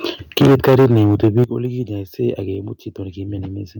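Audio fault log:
0.37–1.44 s, microphone overload: the speech peaks run about 15 dB past the converter's ceiling, and roughly a fifth of the samples in this stretch are flattened at the converter's limit. Squaring off the waveform tops adds dense harmonic distortion, heard as a harsh, crackling edge on the louder syllables. The likely cause is a microphone input level set too high for the talker, so the peaks exceed what the converter can represent.
0.42 s, 1.44 s, 2.55 s, microphone volume stepped down: the whole signal, speech and background together, drops in single steps of about 4 dB, 10 dB and 3 dB. The first two steps fall inside and at the end of the overloaded stretch, and the largest one coincides with the clipping stopping. Each change is abrupt rather than faded, which points to the call software having likely detected the overload and lowered the device's input volume one notch at a time.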